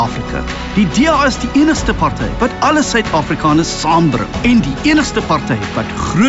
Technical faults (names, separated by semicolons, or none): none